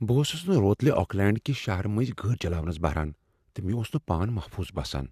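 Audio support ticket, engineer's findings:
No audible faults found in the speech clip. Nothing to attribute to any component in the audio path.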